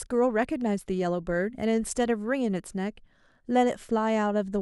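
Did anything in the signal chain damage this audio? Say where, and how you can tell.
No, nothing in the signal chain audibly damaged this speech recording. No stage from capture to playback leaves a mark that can be heard.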